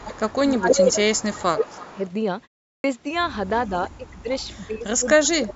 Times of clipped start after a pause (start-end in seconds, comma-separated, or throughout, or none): 2.74-2.84